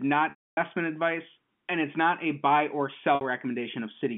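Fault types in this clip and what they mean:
Packet loss with pitch repetition: audio went missing, and the receiver bridged each gap by repeating the last pitch period. The 270 ms dropout at 0.30 s fades from a held buzz into silence. The 60 ms gap at 3.15 s sounds like a brief buzzy hold.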